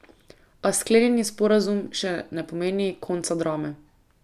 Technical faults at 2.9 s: none

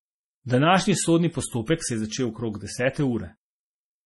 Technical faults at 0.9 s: MP3 compression

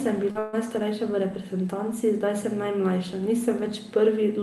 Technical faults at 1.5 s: none

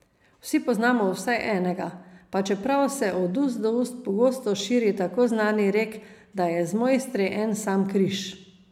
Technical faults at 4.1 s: none

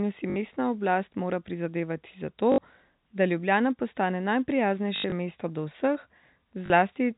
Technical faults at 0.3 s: packet loss with last packet repeated

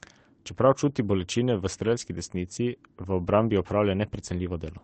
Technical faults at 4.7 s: none

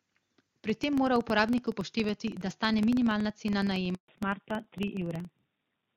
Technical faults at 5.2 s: filter restarted on every block; fallback to narrowband

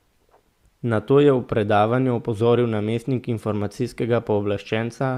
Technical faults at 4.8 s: none

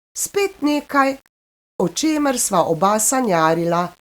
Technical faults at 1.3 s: low bit depth without dither

